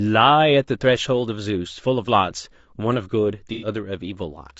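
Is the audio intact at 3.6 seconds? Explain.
No. Between about 3.53 and 3.68 s, AAC frame loss with concealment breaks the signal: a few consecutive compressed frames, about 90 ms of audio by the sound of it, never reached the decoder, so it rebuilt the gap from the last good spectrum, reusing its energy with scrambled phase. Because the gap is short, the result is not a dropout to silence but a smeared, noisy, phasey patch where the speech loses its shape.

Underneath that, the whole clip carries plainly audible low-delay AAC compression, likely AAC-ELD at around 32 kbps. Its short frames resolve the voice's pitch harmonics poorly and spend bits inefficiently, so at this rate the speech comes out rough and grainy, with noise filling the spaces between harmonics and a thin, synthetic-sounding top band. At 3.6 s this coding texture is still present behind the concealed patch.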